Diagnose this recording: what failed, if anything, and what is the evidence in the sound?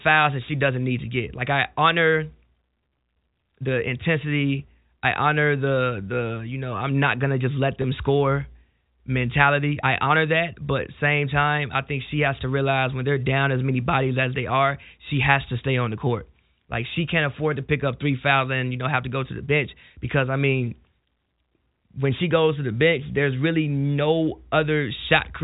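The network stage failed once: packet loss with pitch repetition at 7.82 to 7.84 s, right after "not gonna just let" and before "score mentality I honor". About 20 ms of audio is missing, consistent with a single lost packet on the G.711 telephone coding path. The receiver's concealment filled the gap by repeating the last pitch period, so the sound briefly holds with a slight buzz. On a spectrogram, the harmonics run flat and unchanging across that sliver. In the waveform, identical cycles repeat.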